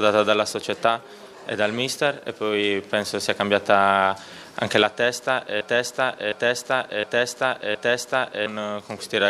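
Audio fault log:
5.61–8.46 s, broken-record loop: a 0.71 s fragment repeats exactly, back to back, four times, and the audio due in that span never plays. The likely cause is a stalled player, encoder or stream resending the last fragment it held.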